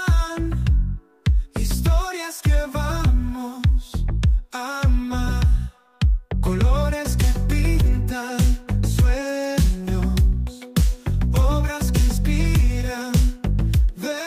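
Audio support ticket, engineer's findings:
No audible faults found on review. Nothing in the signal path points to a defect needing action.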